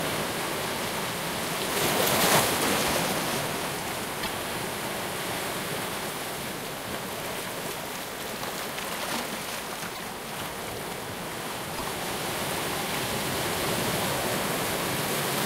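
At 4.22 to 4.28 s, 9.94 to 10.00 s and 11.77 to 11.83 s the sound skips forward with a brief garbled glitch of about 55 to 60 ms, roughly two 26.1 ms frames. The likely cause is a broken MP3 bit reservoir: after frames went missing, the following frames reached back for borrowed data and decoded bytes belonging to other frames. On a spectrogram each event appears as a narrow vertical band breaking the surrounding texture, and on a waveform as an abrupt discontinuity in the envelope.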